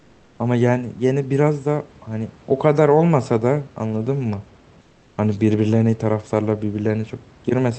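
Comfort noise in place of the background at 0.00–0.37 s and 4.81–5.17 s of this speech: the room's background gives way to steady, featureless hiss about 4 dB quieter, likely from Opus discontinuous transmission.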